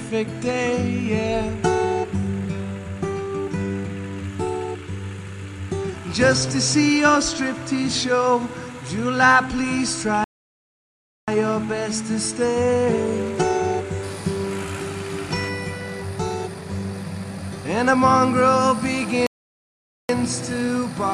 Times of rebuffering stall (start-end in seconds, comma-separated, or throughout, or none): 10.24-11.28, 19.27-20.09